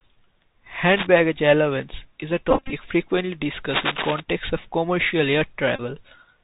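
Bluetooth CVSD headset codec damage runs through the whole speech clip: a one-bit-per-sample stream at 64 kHz whose step size adapts, so nothing above 4 kHz survives. Loud high-frequency parts outpace the step and distort, s sounds turn scratchy, and a granular hiss sits underneath.

Cable scratch noise at 0.92 to 1.07 s sounds like a brief rustling burst at about 5 dB below the speech, likely from a worn cable or connector shifting and rapidly changing its contact resistance.

Bluetooth headset packet repeated at 2.51 to 2.74 s: over about 218 ms, roughly 139 ms of voice packets were lost, and the chip decoded the previous packet's bits again in their place. The longest run, around 20 ms, gives a short buzz near 267 Hz from the 3.75 ms repetition.

Cable scratch noise returns at 3.70 to 4.21 s, longer and louder, roughly level with the speech, a dense uneven scratching.

Bluetooth headset packet repeated again at 5.76 to 5.80 s: about 30 ms of packets were replaced by repeats of the last good one, leaving a brief buzzy stutter.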